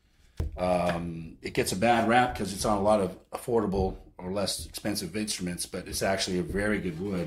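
At 0.4 s there's a tiny jump where roughly 20 ms goes missing, likely a dropped buffer (overrun) splicing the audio straight across the gap.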